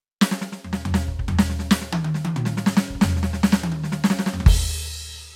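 The music comes across with no audible technical faults at any point in the recording.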